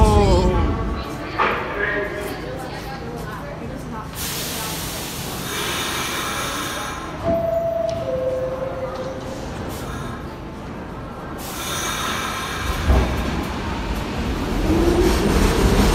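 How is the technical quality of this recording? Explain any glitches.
One glitch stands out, near the very end. From 15.28 to 15.30 s there is DAB burbling. Weak reception let a small number of bit errors slip past error correction into the MP2 data. Corrupted samples put short blips of noise into individual sub-bands across a few frames. The result is a few brief watery blips over the sound.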